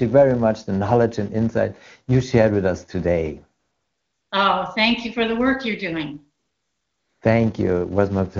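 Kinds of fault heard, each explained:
Filter restarted on every block: the filter resets its state at each block boundary, so a 200 Hz buzz of small start-up ticks runs throughout the speech, tracking its level.
AMR comfort noise: with no speech frames sent, synthetic smooth noise replaces the real background from 3.59 to 4.31 s and again from 6.39 to 7.21 s.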